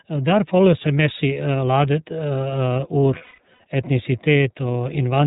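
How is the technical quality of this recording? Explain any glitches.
The recording has plainly audible coding damage throughout and one dropout burst near the end.

iLBC codec: The whole clip went through the narrowband iLBC codec, whose character fits its 13.33 kbps mode with 30 ms frames. Everything above 4 kHz is gone, so the speech sounds muffled, slightly rough and synthetic.

Lost iLBC frames: Between 3.18 and 3.6 s, packets went missing, about 270 ms in total spread over 420 ms, with the longest gap around 150 ms. The decoder filled each gap by repeating the last pitch cycle mixed with noise, which sounds like a held, slightly buzzy vowel. The speech snaps back almost immediately afterwards.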